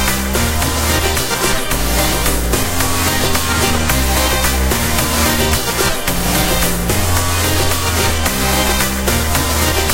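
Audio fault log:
No audio fault to log for these sounds.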